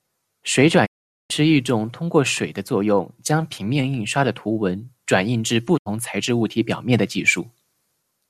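The speech fades to silence within about 20 ms from 0.85 to 1.32 s and again from 5.77 to 5.88 s: a digital broadcast dropout, with the receiver muting while frames were corrupt or missing.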